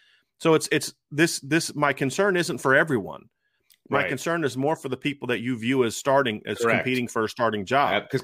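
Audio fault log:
Nothing stood out on listening to this speech recording.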